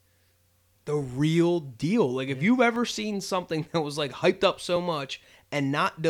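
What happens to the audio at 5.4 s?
Nothing goes wrong at 5.4 s; the audio is intact there, with no dropout, click, distortion or other fault at that moment.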